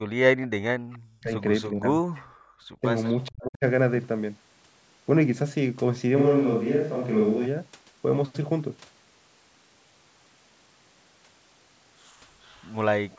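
Speech suppressed in double talk at 0.03 to 1.33 s, 1.7 to 2.34 s and 3.29 to 3.65 s: the voice sinks by around 40 dB, likely because the echo canceller couldn't separate it from the far side talking at once. Background gated by the echo canceller at 2.64 to 2.8 s: the room sound drops by about 33 dB for a brief moment while the canceller clamps down on the microphone. Echo leak at 12.42 to 12.75 s: a faint copy of the voice, about 35 dB down, trails 431 ms behind, likely residue the canceller failed to remove from the loudspeaker pickup.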